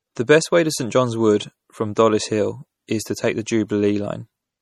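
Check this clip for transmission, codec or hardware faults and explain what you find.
There is one fault, running through the whole recording. The speech sounds watery and swirly, with nothing above 19.2 kHz and plainly audible damage. That is likely MP3 compression at a low bitrate, around 48 kbps, with weak frequency lines dropping in and out between frames.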